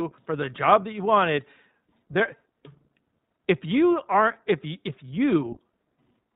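The whole clip runs through the iLBC codec, so nothing above 4 kHz survives and the speech has that slightly rough, synthetic edge. The damage is plainly audible, and the character fits iLBC's 15.2 kbps mode with 20 ms frames, each coded on its own.

From 1.84 to 1.86 s there's a lost iLBC frame, a 20 ms gap that points to a single dropped packet. The decoder covers it by repeating the last pitch cycle with some noise, so you get a brief held, buzzy vowel before the speech snaps straight back.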